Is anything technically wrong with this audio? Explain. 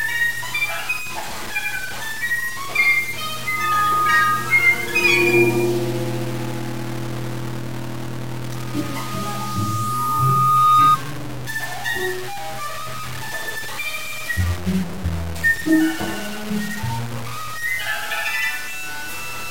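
Yes, there are two problems. Throughout the clip, the sound is coarse and grainy. The distortion tracks the signal and sits only about 15 dB below it. Quiet passages sputter or collapse to silence. The likely cause is low bit depth without dither: samples truncated to very few levels, which fits roughly 5-bit resolution. On a waveform the trace looks stair-stepped. A spectrogram shows broadband hash that rises and falls with the sound instead of a steady noise floor.

Loudspeaker feedback squeal appears twice, from 3.29 to 4.65 s and from 8.55 to 10.97 s. Both are a steady 1.2 kHz tone, the frequency at which the microphone-to-speaker loop gain exceeds one, so it reinforces itself. The first swells within a fraction of a second to about 5 dB above the signal. The second grows over roughly two seconds to about 10 dB above. Each shows as a bright horizontal line at 1.2 kHz on a spectrogram and a swelling sinusoidal envelope on the waveform.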